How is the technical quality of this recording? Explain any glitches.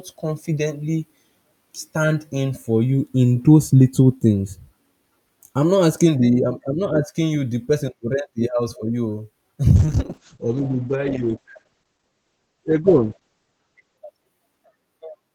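There's one real problem here, a call bitrate drop running from about 9.77 s to 14.05 s. The connection's bandwidth estimate sagged, so the encoder got squeezed from 64 kbps down to roughly 9 kbps and stayed there for about 4.2 s. At that rate it quantises much more coarsely and trims the audio band from around 20 kHz to 8 kHz, so the speech turns muffled and watery.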